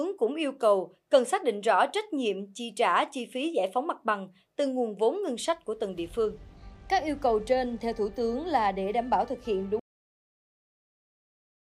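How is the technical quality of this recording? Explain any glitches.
The recording has one clear defect, a cut-off end. At 9.80 s the sound stops mid-event because the final buffers were never written, dropping straight to digital silence through 11.70 s. The waveform shows a flat line with no decay tail, and the spectrogram goes abruptly blank.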